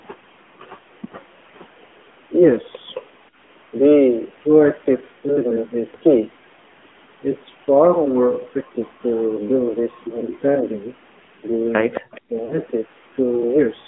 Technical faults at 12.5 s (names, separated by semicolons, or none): AMR narrowband mobile codec; lost AMR speech frames